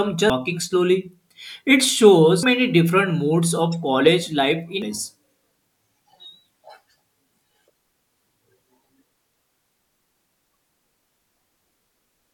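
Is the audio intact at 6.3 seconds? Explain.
Yes, the speech at 6.3 seconds plays through cleanly, with no dropout, click, distortion or other fault at that moment.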